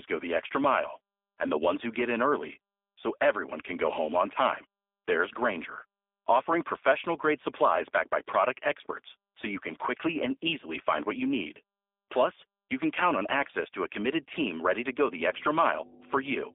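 G.729 codec damage runs throughout this speech recording: the 8 kbit/s model rebuilds each frame from a filter and a few pulses, leaving it rough, synthetic and dull, with a 300 Hz to 3.6 kHz line band and nothing above 3.7 kHz. Mains hum enters at 14.96 s, right after "committed team ready to", and lasts to the end at 16.54 s. It is a loud, steady 50 Hz tone only a few decibels below the speech, pointing to a ground loop or nearby transformer coupling the power line into the signal.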